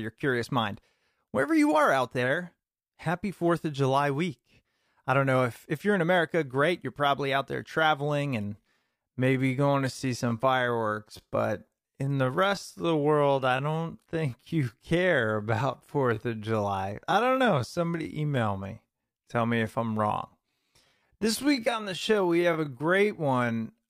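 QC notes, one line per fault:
8.45–23.90 s, time-stretched section: Right after "probably out there traveling", the pace suddenly drops to about two-thirds of normal speed, 0.665x, and stays there to the end. The pitch does not fall with it. The speech drags. This is likely software stretching the audio to fill a length, repeating short pieces to slow it while holding pitch.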